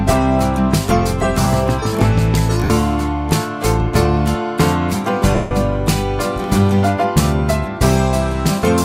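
At 2.64 to 2.70 s, about 60 ms of lost LE Audio frames (which fits six 10 ms LC3 frames) is concealed by repeating the last spectrum with scrambled phase. Tones blur into a brief noisy smear, seen on a spectrogram as a smudged block of broadband texture.

At 3.95 s, a tiny skip of roughly 7 ms is heard where the waveform jumps without any silence between the two sides. This is likely audio missing between chunks, with a 2.5 s chunk boundary where a sliver was dropped during the handover.

From 5.35 to 5.51 s, a longer 160 ms run of lost frames smears at first and then fades toward silence. The spectrogram shows a textured patch that dims across its length.

At 6.44 s, a second skip, again roughly 7 ms, lands about 2.5 s after the first. It shows as a vertical seam in the waveform.

Light compression leaves at most a faint watery texture on noise and attacks.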